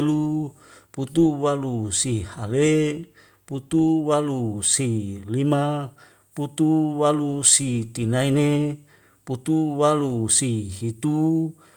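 No technical faults can be heard anywhere in this speech recording.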